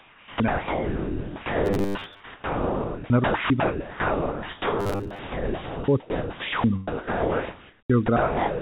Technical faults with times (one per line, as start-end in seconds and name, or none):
0.00-8.61 overdone noise removal
0.00-8.60 sound chopped by the voice detector
1.65-2.20 robotic sound from repeated short buffers
4.80-5.19 robotic sound from repeated short buffers